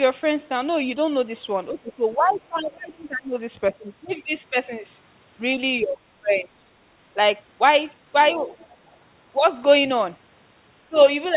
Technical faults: speech suppressed in double talk; other side's voice leaking through

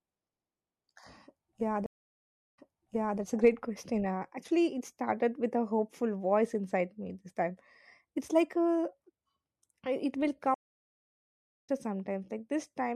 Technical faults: stream reconnect

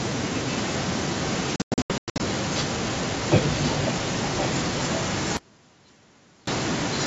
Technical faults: echo leak; packet loss on an ADPCM call; audio dropout to a faint residue

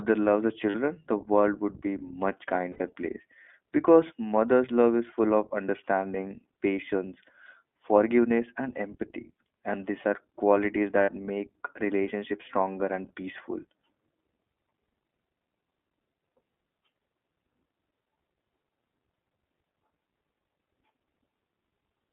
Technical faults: iLBC codec; lost iLBC frames

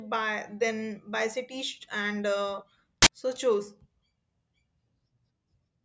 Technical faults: file tags played as audio

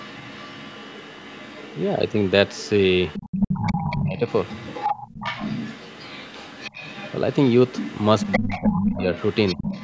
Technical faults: other side's voice leaking through; speech suppressed in double talk

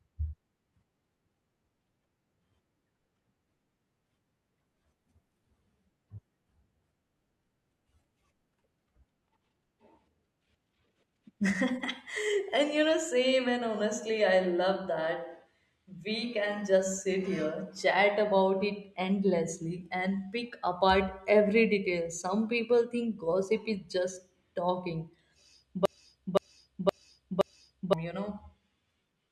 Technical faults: broken-record loop

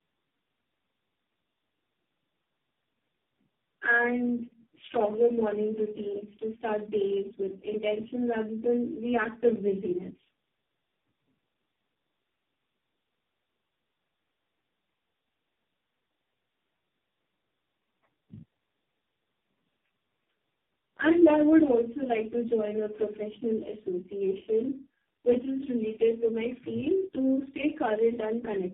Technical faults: tandem speech coding

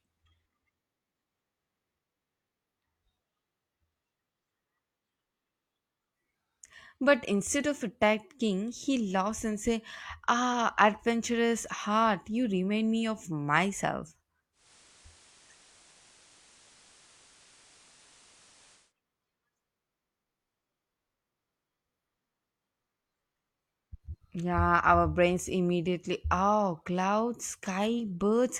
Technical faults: digital radio blending to analogue

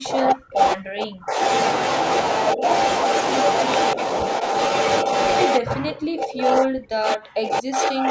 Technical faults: speech suppressed in double talk

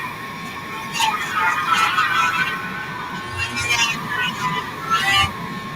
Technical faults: feedback echo between two devices

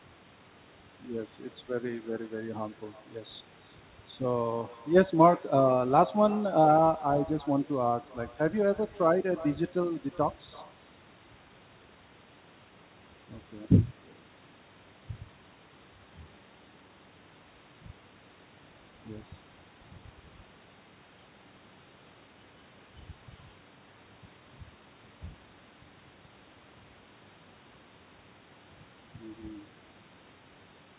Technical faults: echo with no canceller

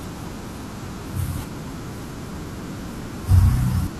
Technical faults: none

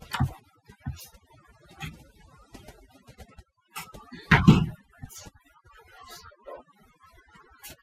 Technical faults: overdone noise removal; DAB burbling

